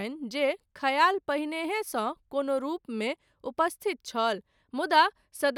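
No dropouts, clicks, distortion or other technical faults can be heard anywhere in this speech recording.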